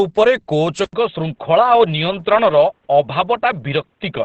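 Opus compression, throughout the speech: the audio stops at 8.7 kHz and sounds muffled and hoarse, likely from Opus in its SILK speech mode at a rate near 16 kbps.

Input switched to a poorer device, from 0.85 s to the end: after an 80 ms silence, the band likely narrows to 3.9 kHz on a poorer input device, sounding duller, with faint new noise, at an unchanged level.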